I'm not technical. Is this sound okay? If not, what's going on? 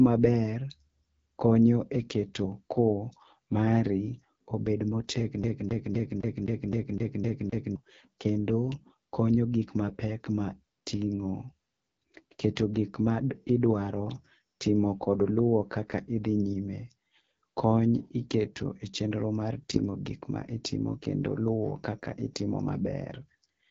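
No. The whole clip has passed through the AMR wideband (HD Voice) codec at one of its lowest settings. The speech sounds rough and raspy throughout, and nothing is heard above about 7.4 kHz, so the top end is dull and missing.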